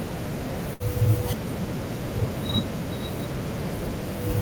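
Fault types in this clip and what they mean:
Burst of packet loss: a short run of audio data was lost or arrived too late to play, so the receiver extended the last sound for about 64 ms while fading it, then resumed with about 60 ms of speech skipped, between roughly 0.73 and 0.83 s. On a spectrogram the spectrum freezes into a static, repeated band that dims before an abrupt jump. The waveform shows a tapering, self-similar stretch followed by a discontinuity.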